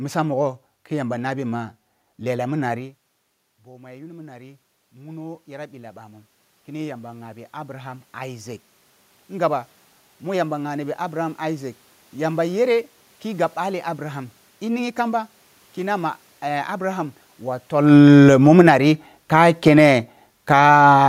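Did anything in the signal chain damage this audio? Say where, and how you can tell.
Yes. Call processing: automatic gain rising from 1.53 to 11.78 s adds about 15 dB. Voice and room noise swell together, so the gain stage, not the talker, is ramping.

Call processing again: automatic gain falling from 17.72 to 20.69 s pulls the level down about 11 dB. Background sinks with the voice, unlike the talker movement near 17.5 s.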